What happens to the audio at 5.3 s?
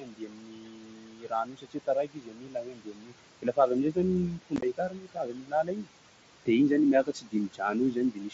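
At 5.3 s the speech is being cut by the noise suppressor. The span runs from 3.42 s to 5.89 s, and about two seconds of it are affected. The suppressor mistakes parts of the speech for background noise and turns them down along with it, by about 22 dB at the deepest point. Soft consonants and word endings sound swallowed.

Noise suppressor artifacts are present at this moment too, as they are through the whole clip. The suppressor lowers each frequency band it judges to be steady noise, frame by frame, cutting the room noise by about 21 dB. That noise sits only about 14 dB below the speech. The leftover background sinks in pauses and rises under speech. All of this passes through the mSBC wideband headset codec.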